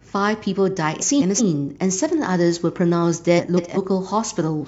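From 1.01 to 1.40 s and again from 3.38 to 3.78 s, frames play out of order. Two adjacent blocks of about 186 ms swap places, giving a garbled flutter. Nothing is lost.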